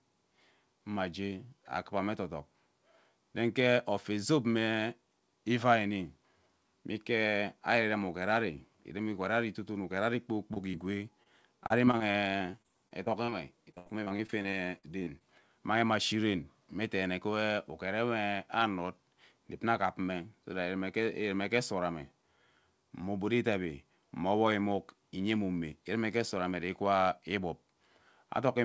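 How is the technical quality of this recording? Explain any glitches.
The recording has audible packet-loss damage between about 10.5 and 15.2 s. It was carried over a call codec with nothing above 8 kHz, which fits G.722.

Short concealed packet loss at 10.54–10.58, 10.72–10.75 and 11.23–11.28 s: about 20 ms of audio arrived too late, and the receiver extended the preceding sound to fill each hole, leaving brief smears or wobbles.

Repeated packet loss (robotic sound) from 11.64 to 13.34 s and 13.72 to 15.22 s: roughly fifteen gaps per stretch, the longest 32 ms and then 75 ms, were each patched by continuing the previous sound. That concealment covers about a fifth of each stretch and makes the speech choppy, with pieces missing.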